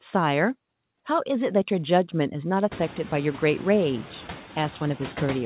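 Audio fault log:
Throughout: noise suppressor artifacts. The suppressor pulls the steady background down by about 5 dB between phrases and lets it swell back under speech. This is clearest after the room noise rises sharply around 2.5 s. Unlike a gate, it never reaches silence, leaving a residue.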